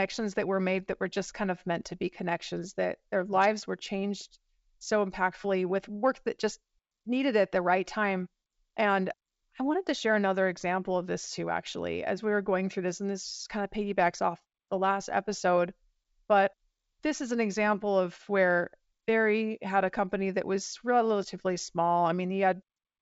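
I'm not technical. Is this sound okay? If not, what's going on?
Yes, nothing in this speech recording has gone wrong. It has the clear, fuller sound of a wideband (G.722) phone call, with at most a faint hiss in the highest tones.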